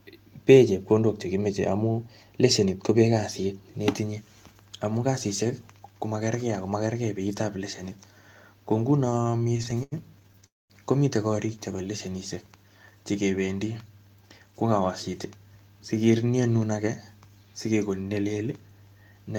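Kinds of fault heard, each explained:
Repeated stalls (stutter): Between 9.05 and 10.44 s the sound catches 25 times, each gap filled by extending the last sound, the longest 86 ms. That adds 325 ms, about a quarter of the span. Unlike a freeze, these are many short hitches that leave nothing missing.
Call audio freeze: At 10.46 s the sound holds for 237 ms, fading into about 210 ms of silence, before resuming where it stopped. It is one long hold rather than a string of short catches, likely from packets held up long enough to empty the jitter buffer.
Jitter buffer slow-down: From 11.76 to 12.11 s the speech runs at 90% speed while its pitch stays the same, stretched by 43 ms of repeated pitch periods. Unlike a stall, there is no hold or gap, only a drawn-out delivery.
Jitter buffer speed-up: From 14.02 to 15.09 s the speech runs at 111% speed with unchanged pitch, as about 150 ms of short pitch-period pieces are trimmed out. 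It is the opposite of the slow-down, sounding hurried rather than drawn out, and it has no gaps.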